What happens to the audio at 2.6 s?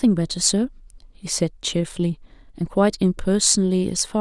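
At 2.6 s the speech carries on intact, with no dropout, click, distortion or other fault at that point.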